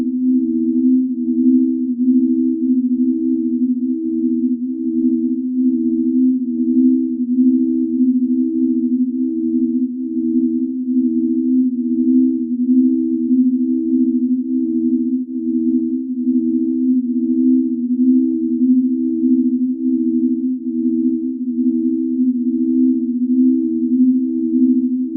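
On listening, nothing in these sounds stood out as a technical problem.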